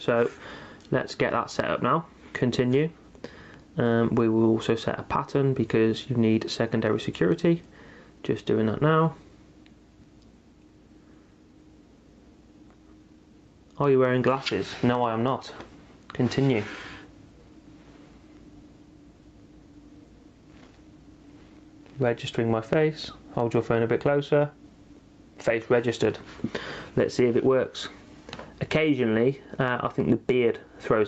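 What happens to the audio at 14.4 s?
At 14.4 s you're hearing gain pumping, and it runs through the whole clip. The gain swings by roughly 10 dB, likely from input gain set far too hot with a fast limiter clamping down, so everything sounds squashed. All of it sits within the 8 kHz band of the call path.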